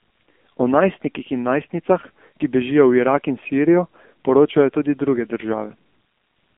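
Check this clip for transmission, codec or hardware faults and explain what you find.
One fault runs through the whole clip. The speech sounds thin, buzzy and synthetic, with nothing above 3.6 kHz. This is heavy AMR narrowband mobile codec damage at a low rate that fits about 6.7 kbps.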